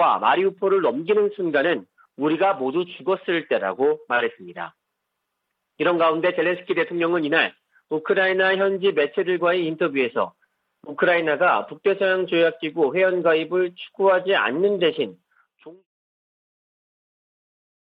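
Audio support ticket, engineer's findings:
No defects found in the signal path; the level eases down in a smooth fade-out from around 15 s to 15.87 s, with no click or hard edge at the tail.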